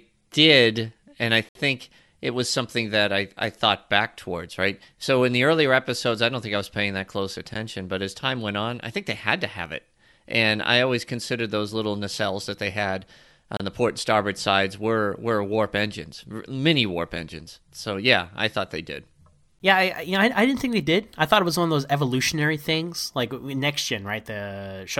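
Every 6 seconds the stream has a gap between stream segments: at 1.49 to 1.55 s, 7.54 s, 13.57 to 13.60 s and 19.59 s. Segment timestamps don't quite line up, so the player drops in hard-edged silence, 12 to 63 ms long, without losing audio.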